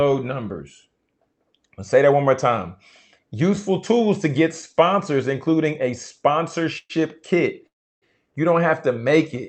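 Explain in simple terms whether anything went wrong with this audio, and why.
Right after "tools to get", around 4.72 to 4.76 s, there's a short stall from a late packet. The sound gets held a moment too long before "including a" carries on, with nothing lost.

Then there are two call audio freezes, at 6.78 to 7.01 s and 7.67 to 8.04 s. The speech stops, fades into a brief buzz and then silence (the second one is mostly silent), and picks up where it left off. The likely cause is packets held up on the network.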